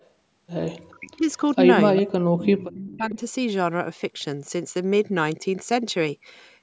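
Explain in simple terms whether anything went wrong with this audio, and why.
Two problems can be heard in this speech.

Echo leak: brief, faint repeats of sound appear at about 0.0, 1.52, 1.96, 2.70 and 2.92 seconds, trailing the original by 0.4 seconds. The one at 1.96 is the clearest. Unlike a room echo, this is a delayed, separate copy. It is likely from the other person's loudspeaker bleeding back into their microphone.

Speech suppressed in double talk: the talker's own voice nearly disappears from 0.91 to 1.28 seconds and again from 2.01 to 3.18 seconds. Here the voice itself goes missing rather than an extra copy being added, likely because an echo canceller mistook overlapping talk for echo.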